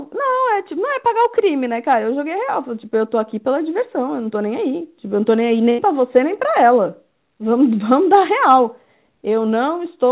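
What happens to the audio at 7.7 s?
Nothing goes wrong at 7.7 s: the speech continues intact through that moment, carried by the same narrowband call path as the rest of the clip, with no content above 4 kHz.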